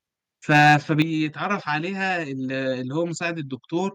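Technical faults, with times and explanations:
0.52–1.01 s, microphone overload: the loudest speech peaks overshoot full scale by about 4 dB and are sliced flat, about one sample in a hundred, adding a harsh crackle. This is likely from input gain set too high. The waveform shows squared-off tops, and the spectrogram shows broadband vertical streaks at each clipped peak.
1.02 s, microphone volume stepped down: speech and background fall together by 7 dB in a single step, right after the distorted stretch. This is likely the call software cutting the device's input gain. The waveform envelope shrinks abruptly, and the spectrogram dims evenly across all frequencies.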